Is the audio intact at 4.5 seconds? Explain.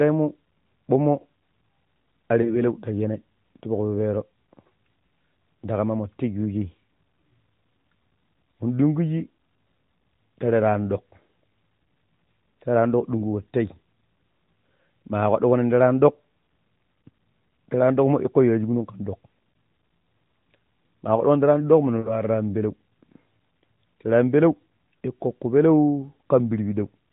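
Yes, the speech at 4.5 seconds is intact.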